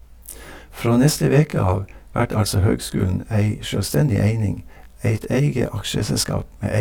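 Speech runs through the whole clip with channel delay (comb filtering): one channel lags the other by around 20 ms, and the mono sum cancels at fixed, evenly spaced frequencies from about 30 Hz up. The notches stay still, unlike flanging, and the lag is too short to be heard as a separate echo.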